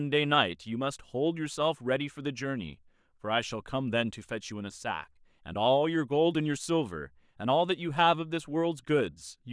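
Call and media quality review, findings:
No call or media quality findings for this speech clip.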